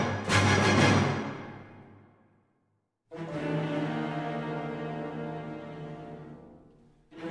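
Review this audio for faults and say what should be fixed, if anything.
No faults; nothing to fix.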